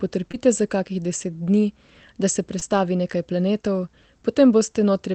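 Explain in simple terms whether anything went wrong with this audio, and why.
Yes, two short hiccups. At 0.31 to 0.35 s, and again at 2.59 to 2.63 s between "da se" and "nekaj planetov", there's short concealed packet loss: about 20 ms of the call arrived too late, so the receiver patched the gap by stretching the preceding sound, leaving a tiny smear.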